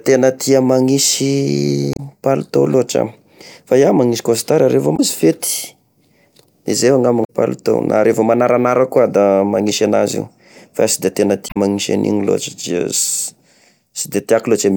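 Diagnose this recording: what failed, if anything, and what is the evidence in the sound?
Damaged data in a compressed stream, heard as short glitches in the speech at 1.93–2.00 s, 4.93–5.00 s, 7.21–7.30 s and 11.46–11.57 s. At the codec stage, corrupted bytes make the decoder misread frames and lose sync until it finds the next valid frame header.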